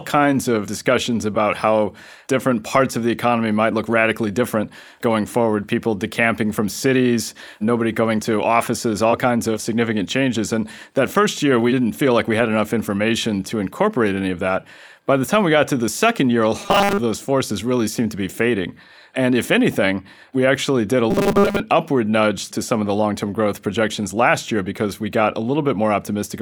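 After "the second year a" (16.61–17.00 s) and after "we actually did a" (21.11–21.60 s), robotic sound from repeated short buffers turns the speech into a steady 200 Hz metallic buzz, likely from 5 ms chunks looping. Unlike a plain dropout, sound continues, with most of it repeated rather than silent.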